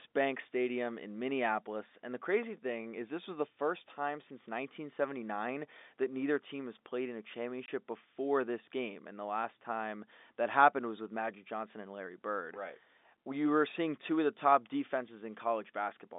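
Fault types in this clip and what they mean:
Packet loss filled with silence: from 7.66 to 7.68 s the speech drops to total silence for 20 ms, a gap that fits a single lost 20 ms packet. The receiver had nothing to play and put in silence, so the cut starts and ends abruptly. Concealment would instead smear or repeat the preceding sound across the gap. The narrow G.711 telephone band carries straight through on either side.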